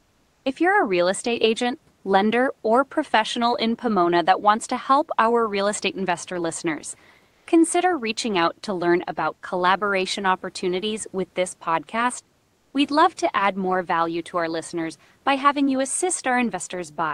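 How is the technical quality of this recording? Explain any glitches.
The speech came over an Opus call link that stops near 12 kHz, with room noise about 41 dB under the voice, and three pauses where comfort noise replaces the background. At 0.00–0.43 s, 7.33–7.45 s (after "real estate investor listeners") and 12.55–12.73 s (after "opportunities with this podcast"), the room's background becomes a smoother synthetic noise, likely from discontinuous transmission. That noise runs about 3 dB quieter, about 4 dB louder, then about 2 dB quieter.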